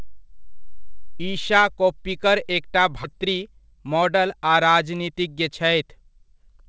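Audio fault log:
3.04 s, skip ahead: right after "ईशा कोप्पिकर एकटा" roughly a second of speech is dropped and the two sides are joined directly with no gap.
3.13–6.67 s, jitter buffer speed-up: short pitch-period pieces are repeatedly removed, about 200 ms in total, so speech runs about 6% faster at unchanged pitch and sounds hurried.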